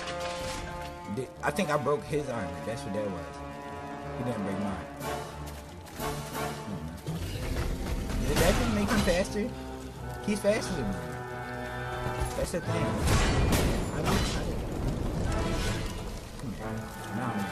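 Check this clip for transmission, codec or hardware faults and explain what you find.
There is one fault: overlap between stream segments, at 1.26, 9.25, 15.23 and 16.22 s. Segment time stamps overlapped, so the player trimmed about 10 to 20 ms of real audio at a segment boundary, on a 1-second grid. Each spot sounds like a click or tiny skip.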